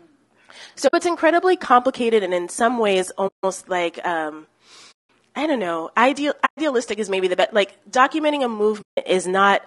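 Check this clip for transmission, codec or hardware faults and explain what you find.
Two faults are audible in this speech: coding damage throughout and five short dropouts.

Low-delay AAC compression, throughout the clip, is the likely cause of the rough, grainy speech. Its short frames resolve pitch harmonics poorly, so noise fills the gaps between harmonics and the top band sounds lowered or synthetic. This fits a low bitrate of around 32 kbps.

AAC frame loss with muting occurs at 0.87–0.94 s, 3.27–3.44 s, 4.91–5.07 s, 6.45–6.58 s and 8.81–8.98 s. The decoder zeroed the missing frames, and the overlapping windows fade the sound down and back up. The result is soft-edged holes lasting roughly 60 to 180 ms.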